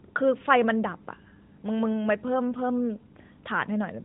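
No technical faults found.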